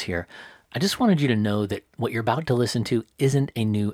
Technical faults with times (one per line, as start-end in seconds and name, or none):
none